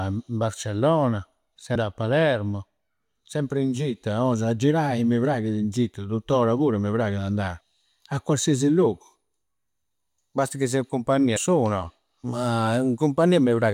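Three stretches of damaged data in the compressed stream break the decoder's reading of its frames: it misreads or discards the corrupted bytes, loses sync, and has to hunt for the next valid frame header before normal decoding resumes. Each loss of sync is heard as a brief chirp, squawk, click or short hole cutting across the speech, first at 1.74 s, then at 7.60 s, and again from 11.36 to 11.38 s, each lasting only a fraction of a syllable.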